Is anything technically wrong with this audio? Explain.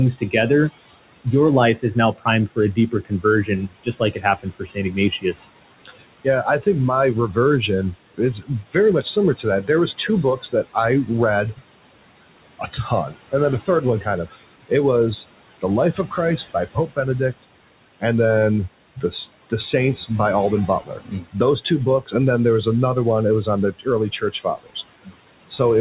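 Yes. Noise suppressor artifacts run through the whole clip. The suppressor pulls down the bands it judges to be steady noise, by about 20 dB, frame by frame. So the room noise, about 15 dB under the speech, sinks in pauses and rises beneath speech, in audio that stops at 4 kHz, which fits a G.711 call path.

Speech cut by the noise suppressor occurs at 0.16 to 11.63 s, 12.59 to 17.45 s (ending just before "and then"), 18.96 to 19.52 s (just after "and then"), 20.68 to 21.35 s and 23.47 to 25.81 s. The suppressor mistook parts of the speech for noise and lowered them by up to about 21 dB, so soft consonants and word endings sound swallowed or faint.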